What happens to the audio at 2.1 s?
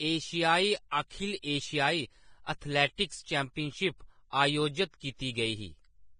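At 2.1 s, as across the whole clip, the speech bears the marks of heavy lossy encoding, most likely Vorbis compression at a low rate that fits an encode of around 22 kbps. The encoder has discarded everything above about 9.7 kHz and quantised the remaining treble so coarsely that fine detail is replaced by noise of similar energy. The result is a dull, hissy, grainy sound, with roughened tones and smeared consonant attacks.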